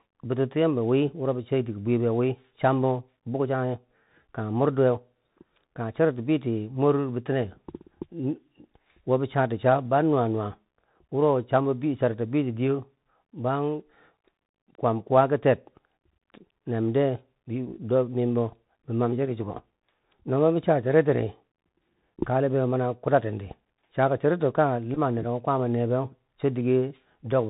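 Throughout, the speech sounds narrow, with scratchy s sounds and a granular hiss beneath it: the Bluetooth CVSD headset codec at 64 kbps cuts everything above 4 kHz. From 24.95 to 24.98 s, just before "nereko kwaama ne", a short buzz near 267 Hz is heard: a Bluetooth headset packet repeated, with about 15 ms of audio replaced by repeats of the previous packet, which fits a run of four.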